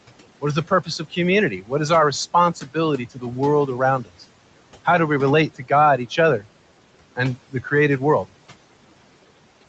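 A noise suppressor runs on the speech from start to finish, pulling down the bands it judges to be steady background by about 18 dB frame by frame. The result is noise suppressor artifacts: the room noise sinks between phrases and swells back under the voice.

At times the same suppressor mistakes parts of the speech for noise and turns them down with the background, which is speech cut by the noise suppressor. Just after "is the", from 0.68 to 1.17 s, dips of about 15 dB make the sound faint and swallowed. More of these follow at 1.51 to 1.72 s, at 2.55 to 2.76 s right after "is our", at 2.98 to 3.37 s, at 4.02 to 4.23 s, at 5.50 to 5.71 s just after "do we relate", and at 7.50 to 7.72 s, with drops of about 11 to 15 dB. Each dip lasts a fraction of a second, and soft sounds lose body and trail off.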